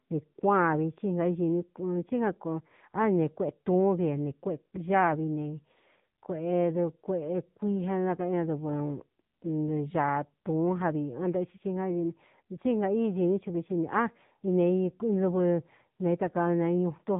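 From start to finish the speech carries AMR narrowband mobile codec damage, and it is heavy. Nothing above 3.8 kHz survives, but what sets it apart from a simple telephone-band filter is the texture: the voice is rebuilt from a vocal-tract model fed by sparse pulses, so it sounds buzzy and synthetic rather than merely muffled. That degree of roughness points to one of the low AMR-NB modes, around 6.7 kbps.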